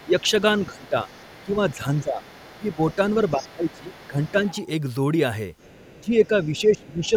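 Right from 0.0 s to 1.74 s you can hear the other side's voice leaking through: a faint second talker sitting well under the main voice, roughly 25 dB down. The likely cause is the far end playing out of a loudspeaker, with the echo canceller leaving a residue in the mic. It comes back from 2.23 s to 4.56 s at a similar level, and again from 5.58 s to 7.09 s, a bit quieter still at around 30 dB below.

Overlapping those stretches is speech suppressed in double talk, with the main voice ducking while the leaked voice is active. There are short dips at 0.04 to 0.18 s and 0.66 to 1.08 s, then longer ones at 1.45 to 2.23 s, 2.58 to 4.36 s and 5.96 to 7.13 s. The first is shallow, about 10 dB, and the deepest near 1 s is about 20 dB. That's likely the canceller failing to separate the two talkers and pulling down everything, so the voice thins and drops out in patches.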